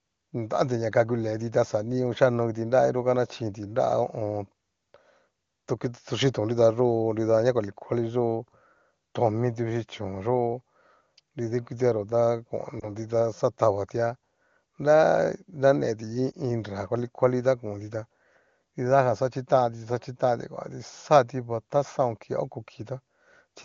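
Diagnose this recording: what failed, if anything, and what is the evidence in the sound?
Lost AMR speech frames, a network-stage fault: short dips near 12.79 s and 16.32 s, one 20 ms frame each. Radio errors failed those frames' checksums, so the decoder repeated the last good parameters at falling gain. A spectrogram shows briefly smeared harmonics, and the waveform shows a small envelope dip.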